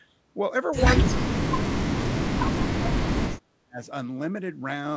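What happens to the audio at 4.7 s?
Nothing goes wrong at 4.7 s: the speech there comes through intact, carried by the WebRTC call path as normal with its band topping out at 8 kHz, consistent with a wideband call codec such as G.722.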